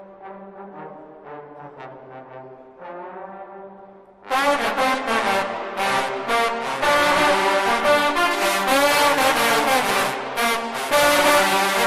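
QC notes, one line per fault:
0.0–8.31 s, de-emphasis applied wrongly: a treble-cut curve meant to reverse pre-emphasis was applied where none existed or applied twice, so the response rolls off smoothly toward the top, about 8 dB down at 10 kHz relative to 1 kHz, leaving the sound dull and muffled until it clears.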